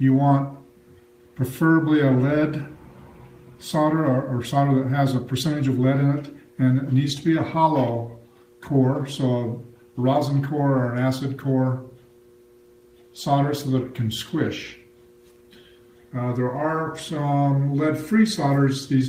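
Nothing technically wrong turns up here; the sound just runs along without a single glitch, dropout or odd noise to point at.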